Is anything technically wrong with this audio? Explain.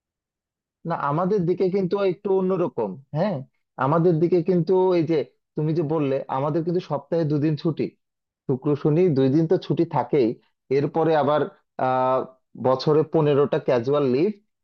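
No, nothing technically wrong.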